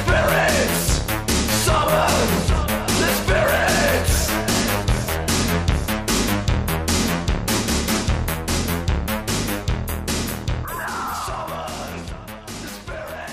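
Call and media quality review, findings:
Level drops abruptly by about 6 dB at 10.65 s and stays down to the end. Likely one channel drops out upstream of the mono fold-down: shared content loses half its sum, and anything only in that channel vanishes. Worth checking the stereo feed.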